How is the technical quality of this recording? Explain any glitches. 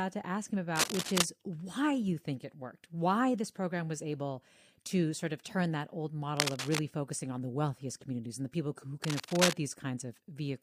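The recording is marred by three short bursts of cable scratch noise, from 0.76 to 1.24 s, 6.37 to 6.80 s and 9.04 to 9.53 s. Each lasts about half a second and is roughly as loud as the speech itself: a dense, ragged rustling laid over the sound. The likely cause is a worn lead or connector being handled, its contact resistance jumping about rapidly and injecting those irregular crackles into the signal.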